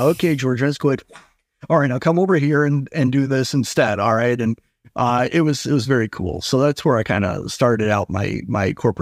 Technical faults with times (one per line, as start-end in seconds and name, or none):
none